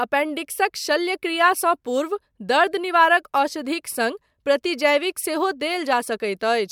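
Nothing stood out on listening to this speech recording.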